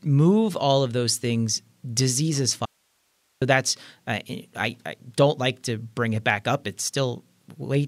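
From 2.65 to 3.42 s, an audio dropout to a faint residue, likely signal loss: speech snaps to hiss about 45 dB down, a near-flat waveform.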